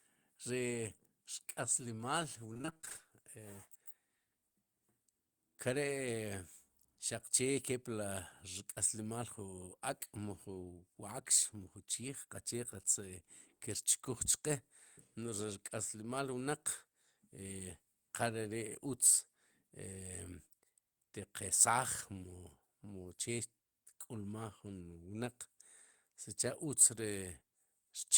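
From about 2.53 to 3.01 s the speech breaks up with repeated packet loss, giving that robotic sound. Across that half second there are twelve separate gaps, the longest around 25 ms, and each one gets papered over by stretching out the last bit of sound before it. Nearly half the span ends up concealed this way, about 233 ms, so it comes across choppy and robotic, with little pieces dropped out.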